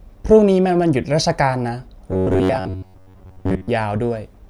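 From 2.11 s to 3.69 s the speech turns into robotic sound from repeated short buffers: a rigid, metallic buzz fixed at about 94 Hz that still tracks the rough shape of the words. The likely cause is audio arriving too seldom, so the playback side fills the gaps by looping the last fragment, roughly 11 ms long to match that buzz, for most of the span while the real audio in between is skipped.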